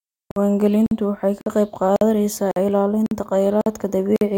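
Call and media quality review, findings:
Gap between chunks in the speech. 50 ms silences at 0.31, 0.86, 1.41, 1.96, 2.51, 3.06, 3.61, 4.16 s. Regular 0.55 s spacing, pointing to 0.5 s chunks. Probable component: chunk assembly or playback. Silence inserted at each join; no audio lost.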